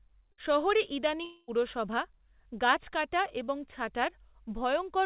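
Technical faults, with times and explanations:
0.32 to 0.41 s, burst of packet loss: a short run of speech packets never arrived in time, so the receiver stretched the last sound for about 56 ms as a fading buzz or hiss, then resumed with roughly 60 ms of speech skipped.
1.25 to 1.51 s, long network dropout: the sound smears into a decaying buzz or hiss for about 230 ms, brief silence follows, and speech returns with about 240 ms missing. Likely a stalled stream that concealment could only bridge. The call path leaves nothing above 4 kHz, consistent with G.711 mu-law.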